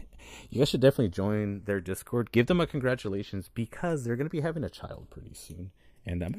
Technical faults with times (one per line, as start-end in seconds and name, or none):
0.00-6.38 channels drifting apart